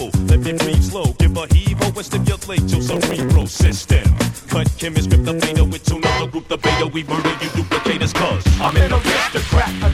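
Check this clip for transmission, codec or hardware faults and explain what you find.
There is processor overload crackle in two bursts, from 2.90 to 3.95 s and from 8.58 to 8.80 s. Buffers of under a millisecond missed their deadlines dozens of times and were skipped, leaving gritty tearing. The waveform shows tiny hard-edged gaps, and the spectrogram shows broadband vertical streaks.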